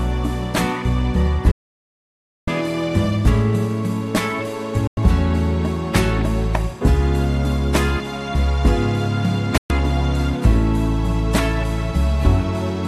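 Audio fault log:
1.51–2.48 s, 4.87–4.98 s and 9.58–9.70 s: digital broadcast dropout. The sound snaps to silence within about 3 ms, holding for 0.96 s, then about 0.1 s and 0.12 s. The receiver muted on lost or corrupt frames, so that audio never returns.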